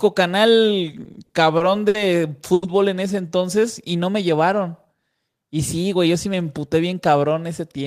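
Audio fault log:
0.91 to 1.97 s, repeated stalls (stutter): packets kept arriving late or too slowly, so the jitter buffer ran dry six times. The receiver bridged each gap by continuing the last sound, 150 ms in all, the longest 60 ms, so the speech drags and stutters with nothing lost.
2.54 to 2.65 s, short stall from a late packet: one packet missed its slot and the buffer emptied, so the receiver held the last sound for 80 ms until it arrived, then resumed from the same point. A sound lingers too long, nothing dropped.
5.58 to 6.34 s, jitter buffer speed-up: the buffer had built up more delay than it targets, so the receiver repeatedly cut short pitch-period pieces, about 50 ms in total. Speech runs at 107% speed with unchanged pitch and sounds hurried.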